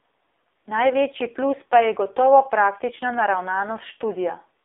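The speech sounds thin, buzzy and synthetic from start to finish, confined to a band of roughly 300 Hz to 3.6 kHz. That points to the AMR narrowband mobile codec, where heavy damage fits a low mode around 5.9 kbps rebuilding the speech from a coarse vocal-tract model.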